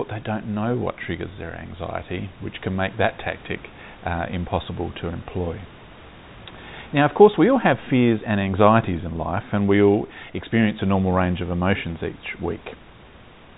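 No technical faults can be heard anywhere in the recording. The room's background noise sits about 24 dB below the speech, and the G.711 telephone coding leaves nothing above 3.8 kHz, which gives the audio its narrow, phone-line character.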